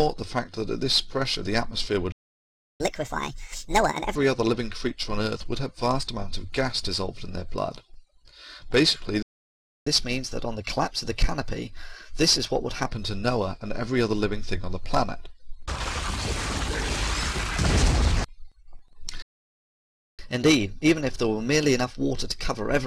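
Playback stalls at 2.12 to 2.80 s, 9.22 to 9.87 s and 19.22 to 20.19 s cut the audio to silence for roughly 0.68, 0.64 and 0.96 s. Each gap is likely the player running out of data or its thread being blocked. Catch-up at higher speed follows every stall as the player resamples its backlog faster to win back lost time. From 2.80 to 4.16 s the sound runs at 1.5 times speed, about seven semitones sharp. From 9.87 to 12.87 s, and again from 20.19 s to the end, it runs at 1.1 times speed, about 1.5 semitones high.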